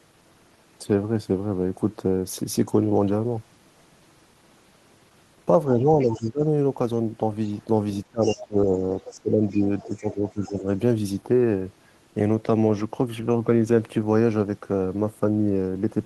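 From 5.79 to 6.42 s, 8.08 to 8.72 s and 9.11 to 10.64 s, the echo canceller likely mistook simultaneous talk for echo, causing speech suppressed in double talk: the voice dips, by up to about 25 dB. Likely residual echo from the loudspeaker, the other side's voice leaking through, surfaces at about 15 to 30 dB below the speech at 5.99 to 6.27 s, 8.21 to 8.41 s, 9.01 to 9.13 s, 9.49 to 10.12 s and 10.51 to 10.55 s.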